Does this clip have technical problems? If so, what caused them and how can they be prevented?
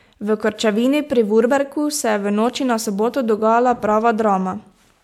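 No, nothing in this speech recording points to a technical fault, so there is no cause to trace and no preventive step needed.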